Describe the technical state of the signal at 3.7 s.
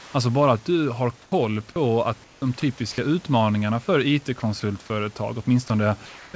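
At 3.7 s the signal is intact, with no dropout, glitch or distortion in the speech at that moment.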